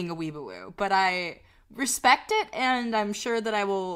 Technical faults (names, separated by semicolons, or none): none